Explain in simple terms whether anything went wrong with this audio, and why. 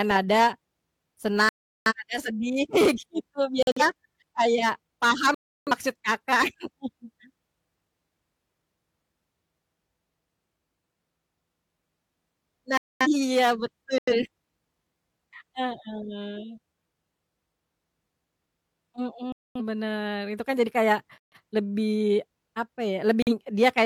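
The speech cuts to dead silence eight times, at 1.49–1.93, 3.63–3.81, 5.34–5.72, 12.77–13.07, 13.98–14.14, 19.32–19.61, 21.18–21.36 and 23.22–23.32 s. That's corrupt frame muted: damaged chunks of the compressed stream got rejected, and the player filled each hole with silence.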